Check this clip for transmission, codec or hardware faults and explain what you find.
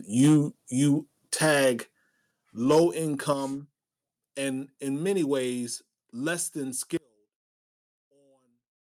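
Three kinds of fault are present: repeated microphone overload, a microphone volume stepped down four times, and one channel inverted in the final stretch.

Microphone overload occurs at 0.20 to 0.38 s, 1.34 to 1.54 s and 2.71 to 2.80 s. The peaks run into a ceiling, with the signal pushed about 5 dB, 3 dB and 2 dB past it, respectively. The likely cause is an input gain set too high for the converter, which removes the tops of the waveform. On a waveform these passages show flattened crests, across roughly 15%, 1% and 7% of samples. On a spectrogram, clipping smears energy upward into harmonics the voice does not produce, heard as a crackling edge on the loudest syllables.

The microphone volume steps down at 0.29 s by about 2 dB, then at 1.29 s, 2.31 s and 3.33 s by about 5 dB each, for roughly 17 dB in total. This is likely call software reacting to the overloaded input and lowering the device gain in discrete jumps rather than smoothly. 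Voice and background drop together at each step. The waveform envelope shows abrupt stair-steps about a second apart, and the spectrogram darkens uniformly across all frequencies at each one.

One channel inverted takes effect at 6.97 s, right after "less than", and lasts to the end. The likely cause is a polarity flip on one side of a stereo pair, so the shared content cancels when the channels are summed to mono. The level falls by about 35 dB, leaving only the residual difference between channels. The waveform collapses to a low-amplitude trace, and the spectrogram goes nearly blank across the whole band, background included.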